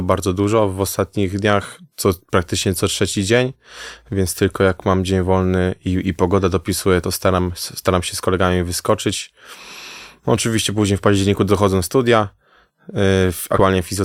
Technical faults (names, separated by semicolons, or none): compressed frames skipped